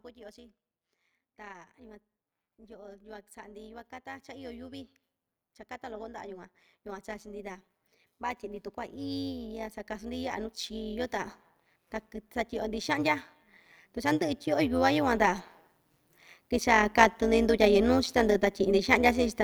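A metallic buzz runs through the whole recording, with extra tones around the voice that make the speech sound robotic. It is overlap-add ripple. The audio was split into windowed frames and rebuilt with an overlap whose windows do not add up to a steady gain, so the level dips and recovers once per frame. Here the frames repeat at around 150 Hz and the swing is deep, about 11 dB; frames this short are why it is heard as a buzz rather than a flutter.

From 1.46 to 4.95 s, the voice and the background noise swell together and grow about 6 dB louder over roughly three and a half seconds. This is automatic gain rising: the gain control judged the input too quiet and slowly turned itself up. It happens again from 8.18 to 11.39 s, this time by about 7 dB. In both cases the room tone climbs along with the speech, which shows the boost is applied to the whole signal rather than to the voice alone.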